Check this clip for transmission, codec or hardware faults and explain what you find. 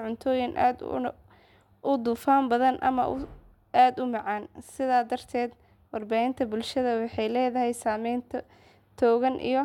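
One hardware fault is audible, affecting the first part of the speech.

Sample clock jitter runs from 0.0 to 6.76 s. The converter's timing wanders by around a microsecond or two, so samples land slightly early or late, and the error scales with how steeply the waveform is changing. It is heard as a grainy hiss, roughly 40 dB below the speech, riding on louder and brighter sounds and dropping away in pauses.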